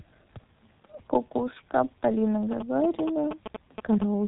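Speech runs through the G.723.1 codec at 6.3 kbit/s, and the damage is heavy. Nothing survives above 3.8 kHz, consonants smear, and the voice turns hoarse. A plain low-pass filter would only muffle, but this codec's slowly updated 30 ms voice model adds the rasp. From 2.52 to 4.04 s, GSM signalling bursts break in nearly as loud as the speech, as a galloping dit-dit-dit of short 217 Hz buzzes. A nearby 2G phone exchanging signalling is being rectified by the audio circuit. Unlike the steady buzz of an active call, this interference comes in clustered groups.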